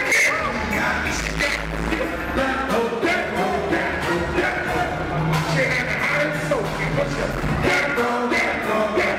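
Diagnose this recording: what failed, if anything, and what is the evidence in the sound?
Nothing in this recording points to a failure at any stage of the chain. No event in the sound calls for a diagnosis.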